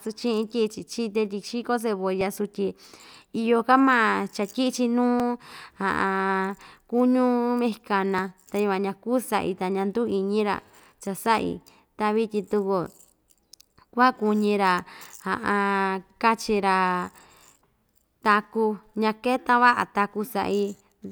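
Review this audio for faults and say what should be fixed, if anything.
The likely culprit is audio missing between chunks: the capture chain seems to work in blocks of about 3 s and drops a sliver of roughly 15 ms each time it hands off from one block to the next, then butts the two sides together with no gap. In this speech clip that produces brief skips at 2.21, 5.20, 8.19, 14.16, 17.15 and 20.13 s, where the sound jumps forward abruptly. Chunk boundaries should be double-buffered or overlapped so the next block is already recording before the current one closes.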